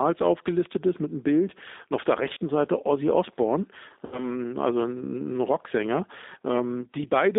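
Throughout, the G.729 codec at 8 kbit/s leaves the speech rough and synthetic, and the spectrogram shows energy confined to roughly 250 Hz to 3.7 kHz. At 2.33 to 2.37 s, just after "und auf der", and again at 4.06 to 4.26 s, VoIP packet loss concealed by the speech codec fills about 40 ms and then 60 ms of missing audio. It does this by extrapolating the last pitch and filter, which produces a buzzy tone or coloured noise that fades. This appears as smeared, repeated spectral patterns with a shrinking waveform envelope.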